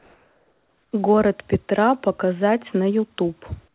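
Comfort noise in place of the background runs from 0.0 to 0.92 s. Before the speech begins, the real background, sitting about 42 dB below the loudest passages, is replaced by a flat, featureless hiss about 2 dB quieter. The likely cause is discontinuous transmission: the sender stopped sending during the pause, and the receiver generated shaped synthetic noise until speech resumed, all within a narrowband call path that carries nothing above 4 kHz.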